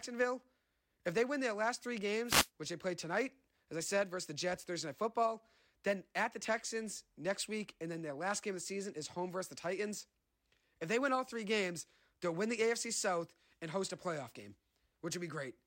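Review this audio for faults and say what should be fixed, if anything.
Wireless microphone noise hit, 2.25 to 2.49 s: the FM radio link fades as reflections cancel, so receiver noise rises into a brief burst of static over the speech. Prevent it by using diversity receivers, keeping the transmitter in clear line of sight, and placing antennas away from reflective surfaces.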